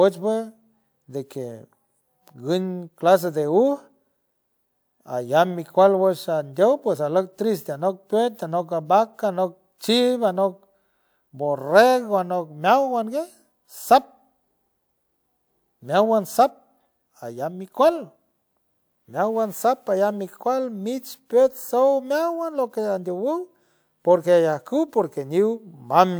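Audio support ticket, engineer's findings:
No audible technical faults found in the signal; nothing to attribute to any component.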